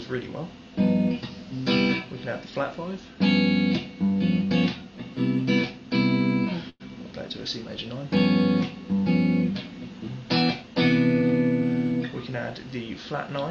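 At 6.69 s the sound stalls for about 0.13 s: a call audio freeze, likely from packets arriving late and the jitter buffer running dry. Roughly 105 ms of fading buzz or hiss fills the gap, ending in a brief silence of about 20 ms. The audio then resumes where it stopped, so nothing is lost but everything after runs about 105 ms later. The top end stops near 8 kHz, consistent with a wideband Opus call path.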